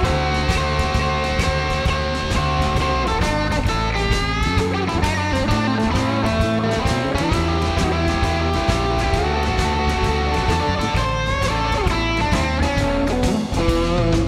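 Nothing technically wrong is audible anywhere in the audio.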